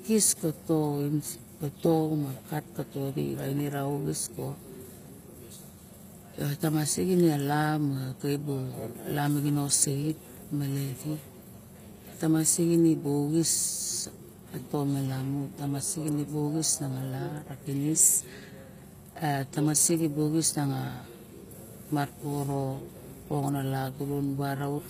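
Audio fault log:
Throughout, HE-AAC compression: the speech sounds gritty, with metallic, lispy s sounds and nothing above 15.5 kHz. The likely cause is spectral band replication rebuilding the treble from copied lower bands, which fits a bitrate around 24 kbps.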